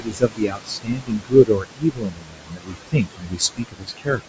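Throughout the clip, noise suppressor artifacts are present. The background is pulled down by about 21 dB between phrases and swells back under the speech. Unlike steady room noise, this level pumps with each frame's gain decisions.

From 0.00 to 4.21 s, speech is cut by the noise suppressor across roughly three seconds of the talking. It misreads quiet consonants and word endings as noise and drops them by up to about 22 dB, so they sound swallowed rather than simply clipped or dropped out.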